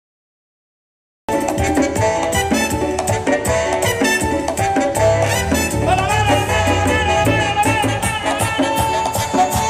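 The audio opens with a cut-off start: there's dead digital silence for the first 1.29 s, and then the sound jumps in abruptly at 1.29 s, already partway through whatever was happening. There's no natural onset or fade-in at all. It's what you get when the recording or stream only began capturing a moment too late, so the front of that sound was never caught and the clip begins mid-event.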